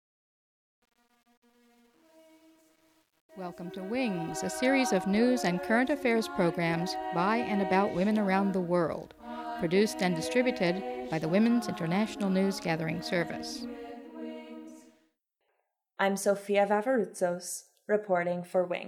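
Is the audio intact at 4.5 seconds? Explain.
No, 4.5 s is still inside the truncation distortion on the fade-in, which runs from the start to 4.57 s. The gain stage keeps too few bits, about 9, with no dither, so the quiet part turns steppy. It's grittiest up to about 3.66 s, then eases as the level climbs.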